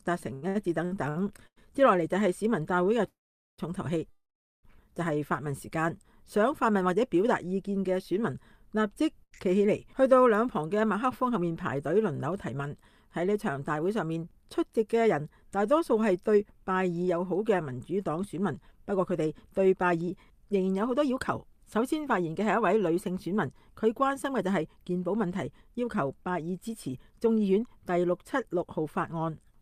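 Repeated stalls (stutter) run from 0.33 to 1.58 s. Packets kept arriving late or more slowly than they were played, so the jitter buffer ran dry five times in that stretch. Each time, the receiver carried the last sound forward until more data arrived. Altogether 370 ms were filled this way, about 30% of the span, and the longest single hold was 92 ms. Nothing is lost, but the sound drags and hiccups instead of flowing.

A call audio freeze occurs from 3.08 to 3.60 s, and another from 4.10 to 4.65 s. In each, the sound is briefly carried on and then drops to silence, for 440 ms in the first and 400 ms in the second, before resuming exactly where it stopped. The likely cause is packets held up in transit, which emptied the jitter buffer. The pauses insert about half a second of delay each while removing nothing.

A short stall from a late packet falls at 9.24 to 9.33 s. One packet missed its playout time, so the receiver stretched the preceding sound by 75 ms and then continued from the same point. 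The result is a sound held slightly too long, with a faint buzzy or dipping quality, though nothing is missing.

Jitter buffer speed-up appears from 14.02 to 14.78 s at 108% speed, and again from 18.19 to 29.50 s at 106% speed. The buffer had accumulated more audio than its target, so the receiver trimmed small pitch-period-sized pieces repeatedly to catch up. This removed roughly 70 ms in the first stretch and around 0.7 s in the second. Pitch stays the same, but the pace is noticeably hurried.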